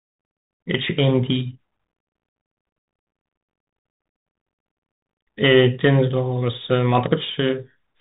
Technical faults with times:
0.00-8.00 Bluetooth CVSD headset codec

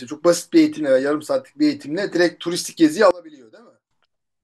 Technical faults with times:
3.11-3.91 one channel inverted

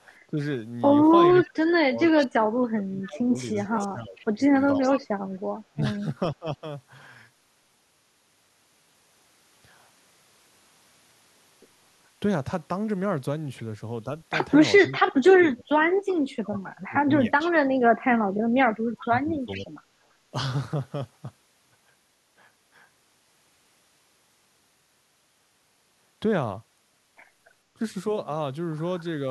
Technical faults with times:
0.28-0.39 speech suppressed in double talk
1.31-5.01 echo leak
1.42-6.65 speech suppressed in double talk
14.87-19.69 speech suppressed in double talk
16.56-17.51 echo leak
19.53-19.66 echo leak
19.97-20.06 background gated by the echo canceller
27.75-27.82 speech suppressed in double talk

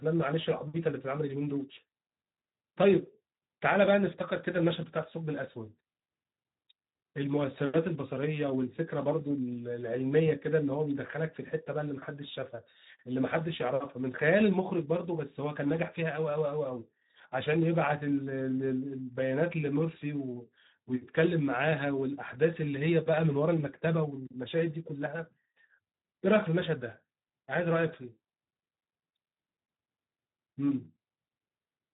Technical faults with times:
0.00-31.93 Speex codec

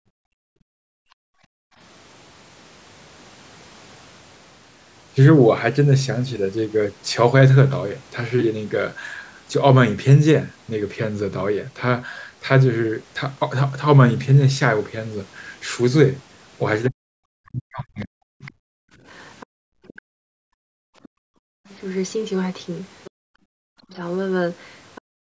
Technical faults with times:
0.00-1.78 background gated by the echo canceller
16.88-18.46 speech suppressed in double talk
18.46-19.93 other side's voice leaking through
18.74-21.68 background gated by the echo canceller
21.03-25.01 other side's voice leaking through
23.11-23.90 background gated by the echo canceller
25.01-25.37 background gated by the echo canceller

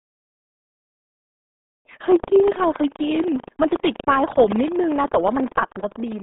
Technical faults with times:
0.00-6.22 buffer tearing
0.00-6.22 RealAudio 14.4 codec

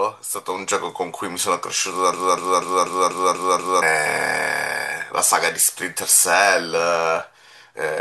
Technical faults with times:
2.13-3.82 broken-record loop

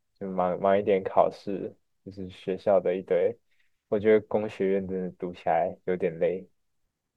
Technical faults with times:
none

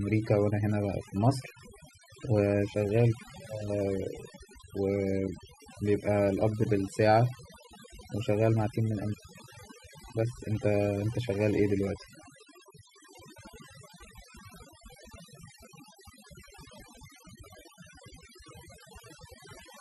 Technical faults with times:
0.00-19.80 overdone noise removal

